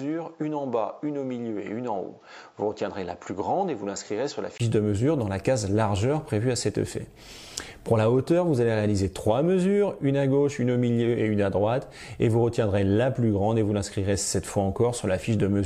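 Input switched to a poorer device, from 0.0 to 4.60 s: the opening sounds dull and boxy, with nothing above 7.6 kHz, a few decibels quieter and over a faint separate hiss, likely from another microphone. A 20 ms gap at 4.60 s marks the return to full clarity.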